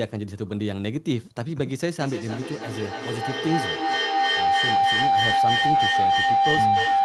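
At 1.97 s a tone near 700 Hz starts and climbs to about 6 dB above the speech: feedback howl, a room loop gaining level every trip.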